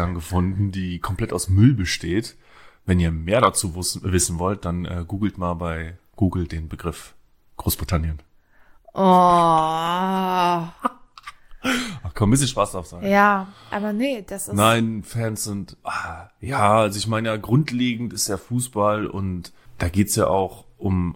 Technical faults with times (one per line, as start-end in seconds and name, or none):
none